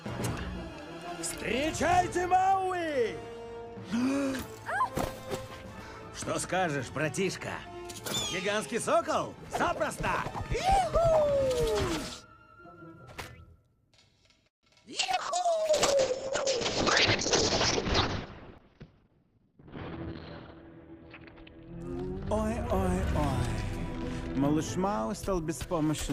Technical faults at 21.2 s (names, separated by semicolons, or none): call bitrate drop